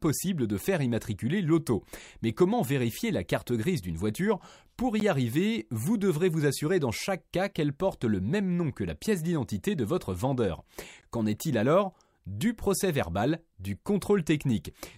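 Brief dropouts break the speech at 5.00 s, just before "y arriver vous devrez", and at 11.01 s, after "d'identité de votre vendeur". They last about 13 ms and 16 ms, six seconds apart. This is a gap at a join of encoded pieces: separately encoded segments were joined with their start delay and end padding left in.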